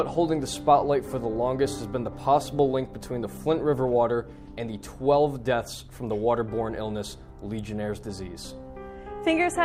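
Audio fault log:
Nothing to log here, as there's no fault to be heard anywhere in this one.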